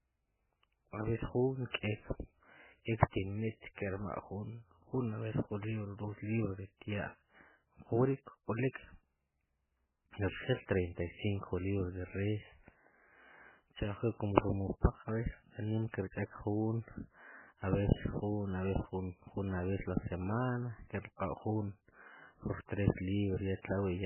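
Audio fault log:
Throughout: likely MP3 compression. The speech has nothing above 3 kHz and heavy watery, swirling artefacts as weak frequency lines drop in and out between frames, which fits a bitrate near 8 kbps. A plain low-pass filter would sound dull but steady, without this warble.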